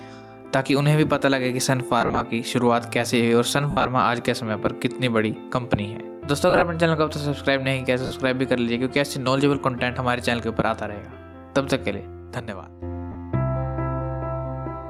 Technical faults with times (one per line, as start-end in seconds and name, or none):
0.00-14.89 gain pumping
2.01-2.22 lost LE Audio frames
3.71-3.87 lost LE Audio frames
6.50-6.63 lost LE Audio frames
8.06-8.11 lost LE Audio frames
13.12-13.16 lost LE Audio frames